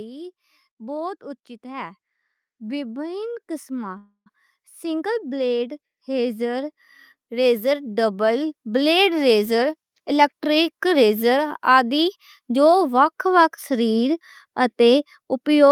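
A speech recording with three faults. From 2.57 to 9.34 s the automatic gain control judged the input too quiet and kept raising its gain, so the level climbs by about 13 dB over nearly seven seconds. The voice and the background noise swell together rather than the speech alone getting louder, which is the sign of automatic gain rising and not of a speaker moving closer. Within that rise, at 3.97 to 4.28 s, there is a call audio freeze. Packets were likely delayed in transit, which left the jitter buffer empty. The receiver stretched the last sound into a fading buzz or hiss lasting 285 ms, and about 90 ms of that is near silence. The speech then continues from exactly where it stopped, with nothing lost, so the freeze inserts a pause and adds 285 ms of delay to the call. Later, from 9.46 to 12.98 s, the jitter buffer speed-up works that delay back off. The buffer was holding more audio than its target, so the receiver cut out many short pieces, each one or a few pitch periods long, in quick succession. 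Around a third of a second is removed in total. The speech plays at 108% of normal speed but keeps its pitch, so it sounds slightly hurried rather than higher.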